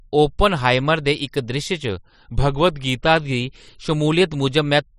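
From 1.89 s to 3.03 s the speech abruptly drops by about 103 cents, roughly a semitone, and slows by 5.77%, then snaps back to normal speed. This is likely a drift correction step, where clock-matching software changed the playback rate in one jump to manage its buffer. Unlike tape wow, the shift is not a gradual or cyclic wobble. Pitch and tempo move together and hold steady, with sharp edges at both ends.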